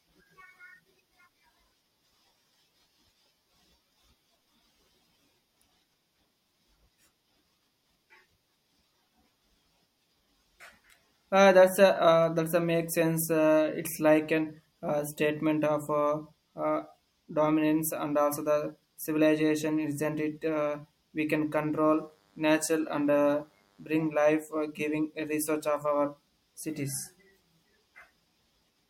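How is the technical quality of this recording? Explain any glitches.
Two separate glitches stand out in this speech recording: a single digital tick and a short stretch of radio-induced buzz.

Bit error spike, 12.24 s, just before "that's a make sense": a single flipped bit in one sample pushed its value away by a power of two before it snapped straight back. Because the disturbance lasts only one sample and peaks at about -28 dBFS, it comes across as one crisp, broadband tick. It has no tonal character and no relation to the speech around it.

DECT cordless phone buzz, 21.88 to 23.88 s, starting right after "we can": a nearby DECT handset or base station was transmitting radio bursts every 10 ms. The audio circuitry rectified that energy into the signal path, producing a thin, steady 100 Hz buzz rich in harmonics. It sits faintly, well below the speech, for about two seconds before stopping.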